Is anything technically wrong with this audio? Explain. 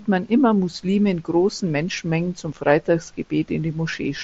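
No, nothing in this speech clip is technically wrong.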